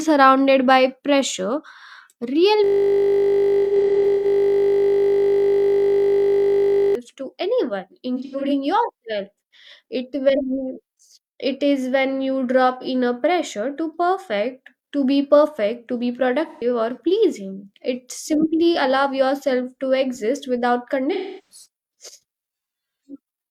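From 2.64 to 6.95 s the speech gets stuck in a system hang loop. The machine or driver froze while the sound hardware kept replaying one 20 ms chunk of its ring buffer, about 215 times. That comes across as a flat, steady 50 Hz buzz.

Layered into that stretch, from 3.64 to 4.25 s, is AAC frame loss with concealment. About 341 ms of audio is missing in patches, the longest around a tenth of a second. The decoder patched the gaps from the last good spectrum, so those spots sound smeared and noisy under the buzz.

The same thing happens again at 8.16–8.52 s (about 213 ms lost, in patches), 12.81–12.87 s (43 ms), 16.48–16.64 s (128 ms) and 21.13–21.65 s (341 ms).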